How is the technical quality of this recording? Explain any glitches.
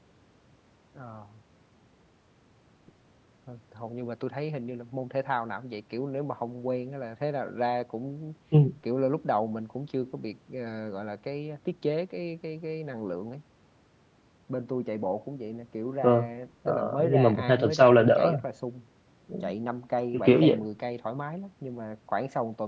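No glitches are audible anywhere in this recording.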